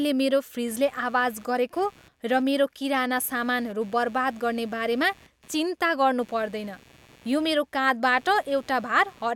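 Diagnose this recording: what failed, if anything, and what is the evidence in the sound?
Computer activity noise, analogue wiring: buzzing pulses near 150 Hz, some 30 dB below the speech throughout, from load-driven ground shifts; spectrogram: evenly spaced vertical streaks.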